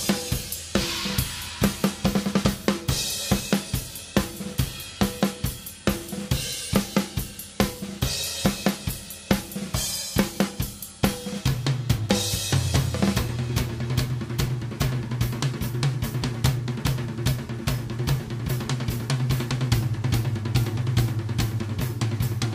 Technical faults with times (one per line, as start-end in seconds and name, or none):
none